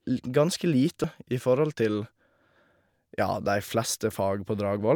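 At about 1.04 s, just before "i forhold til", there's a quick glitch from damaged data in the compressed stream. Bad bytes threw the decoder off, it lost sync and hunted for the next clean frame header.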